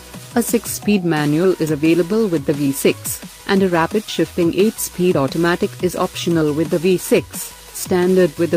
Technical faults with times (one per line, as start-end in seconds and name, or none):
none